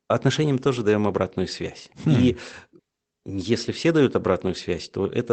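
No technical faults are audible.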